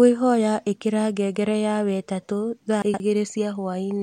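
A speech clip with chunks out of order between 2.82 and 3.0 s: one 60 ms block of audio was delivered two blocks late, so it plays after the two that should follow it. Nothing is missing, but that stretch sounds briefly jumbled, with three hard joins.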